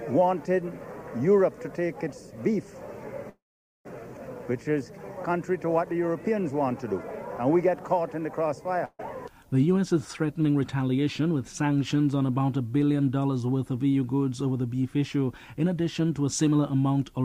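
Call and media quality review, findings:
Call audio freeze, 3.29–3.87 s: last sound held as a fading buzz/hiss, then roughly 0.45 s of silence, audio resuming where it stopped with nothing skipped. Likely delayed packets draining the jitter buffer; continuation fill inserted about 0.56 s of extra delay.

Burst of packet loss, 8.85–9.01 s: brief held, decaying continuation ending in a near-silent dip, then audio picks up further along. About 140 ms of content lost or arriving too late; receiver concealment extrapolated the last sound and faded it over the gap.

Jitter buffer speed-up, 10.33–11.20 s: audio runs about 10% fast at unchanged pitch and sounds hurried. Jitter buffer over target depth; receiver trimmed repeated pitch-period-length segments, removing around a tenth of a second in total to cut latency.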